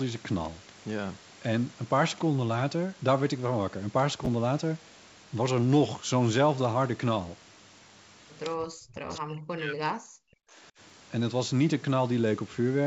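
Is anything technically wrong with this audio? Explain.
Yes. At 4.25 to 4.27 s and again at 10.89 to 10.91 s there is a brief jumbled moment. These are chunks out of order: a 10 ms chunk arrived one slot late, so it plays after its successor.

From 8.56 to 9.32 s and 9.49 to 10.39 s the voice dips by up to roughly 40 dB. This is likely speech suppressed in double talk, where the echo canceller turned down this side's voice along with the loudspeaker echo during overlapping talk.

Around 9.1 to 9.15 s a faint copy of the voice returns, roughly 20 dB down and 286 ms late. This is likely echo leak from a loudspeaker the canceller didn't fully cancel.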